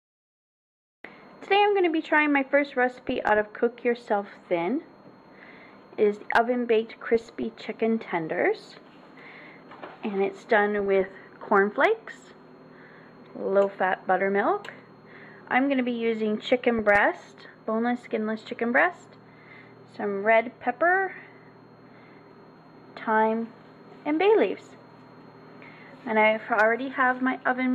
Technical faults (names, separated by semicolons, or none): DAB burbling